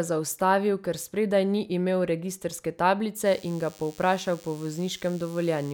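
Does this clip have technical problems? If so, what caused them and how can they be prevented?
Yes. DECT cordless phone buzz runs from 3.26 s to the end. A nearby DECT phone or base station's 100 Hz radio bursts are rectified into a thin, harmonic buzz, well below the speech. Keep DECT phones and bases away from microphones and cables.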